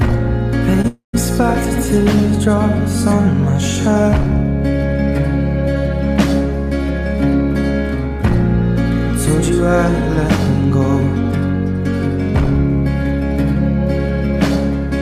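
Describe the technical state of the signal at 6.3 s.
At 6.3 s the signal is intact, with nothing wrong to be heard at that point.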